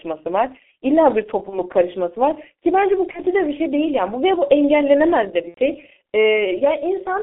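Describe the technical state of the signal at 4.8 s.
At 4.8 s the speech carries G.723.1 codec damage, present for the whole clip. The low-rate coder works in 30 ms frames and updates its voice model slowly. Band limiting to about 250 Hz–3.4 kHz, which fits a roughly 6.3 kbit/s stream, leaves the sound heavily muffled and hoarse, with smeared consonants.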